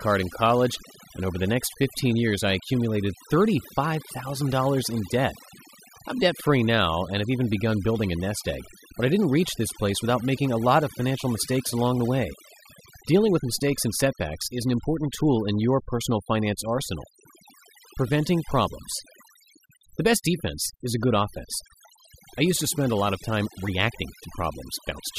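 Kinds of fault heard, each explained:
overdone noise removal: noise reduction set too strong cut whole frequency bands near its noise estimate, so background pauses sink to twinkling near-silence and quiet parts of the voice are lost with the noise.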